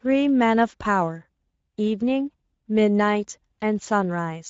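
From start to end, the speech carries Speex codec damage, and it is plainly audible. Speex is a CELP coder. It models the vocal tract and spends few bits on the excitation signal, so the fine grain of the voice is lost. Here that gives a hoarse, noisy texture. Nothing is present above 7.6 kHz. The damage fits a rate near 16.8 kbps.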